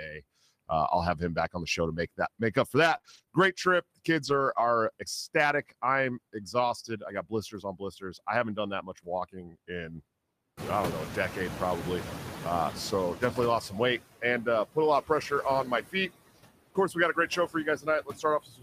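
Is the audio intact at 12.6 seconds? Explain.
No. At 12.6 s the noise suppressor is catching up. The room noise jumped around 10.5 s, and from 10.57 to 13.64 s the noise estimate lags, cutting only about 11 dB. The background stays loud and then sinks over about 3.07 s, which shows on a spectrogram as a bright noise floor fading away. Noise suppressor artifacts are also present here: frame-by-frame band cuts of about 20 dB leave residue that sinks between words and rises under them.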